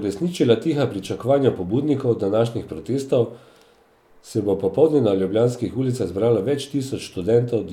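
No technical faults can be heard anywhere in the speech.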